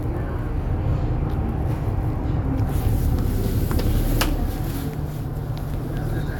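Nothing in this recording stood out as a technical fault on listening.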